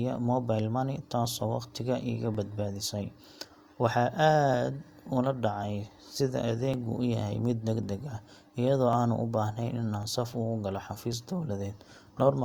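From 0.15 s to 12.22 s, a click recurs every 1.1 s during the speech, about ten in all, likely clock drift buffer slips. Two clocks differing by roughly 1000 ppm force a jump of about 50 samples. Each shows as a thin vertical spectrogram line and a waveform step.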